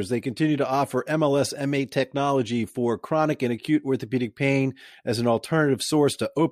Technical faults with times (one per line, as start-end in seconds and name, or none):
none